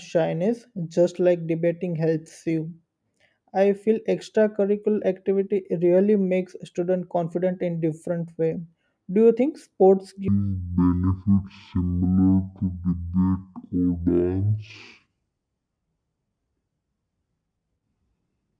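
From 10.28 s to the end, a wrong sample rate slows the speech to half speed and drops it an octave, consistent with 44.1 kHz audio played near 22 kHz.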